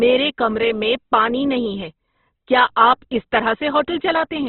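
All the way through, the speech has what's likely Opus compression at a starved rate, around 12 kbps: nothing above 4.1 kHz, and tones gone rough, grainy and noisy.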